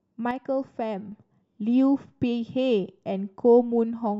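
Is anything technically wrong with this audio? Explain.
Yes. From 0.31 to 1.12 s there is a sudden gain jump. The speech and background noise drop together by about 6 dB, likely from gain applied without a ramp.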